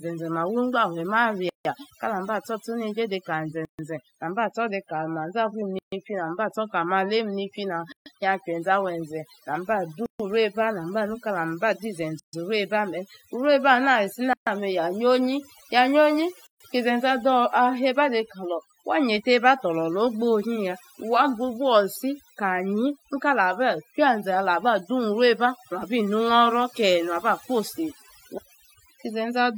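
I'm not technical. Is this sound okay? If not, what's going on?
No. Two things are wrong. First, overdone noise removal: a cleanup tool was pushed too hard, so the background drops to near-silence with little twinkly specks, and quieter parts of the voice got stripped away too.

Second, there's a gap at a join of encoded pieces, heard eight times: at 1.49, 3.65, 5.79, 7.92, 10.06, 12.20, 14.33 and 16.47 seconds. The speech was saved in chunks and stuck back together untrimmed, so each seam leaves a sudden hole, about 0.16 s the first time and 0.14 s after that, before the voice picks up where it left off.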